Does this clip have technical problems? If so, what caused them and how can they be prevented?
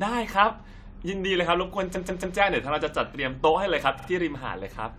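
Yes. Repeated frames at 1.94 to 2.36 s and 3.98 to 4.08 s: compressed blocks of 139 ms and 46 ms replay three and two extra times, stuttering. Prevent it by checking frame sequence numbers and discarding duplicates before decoding.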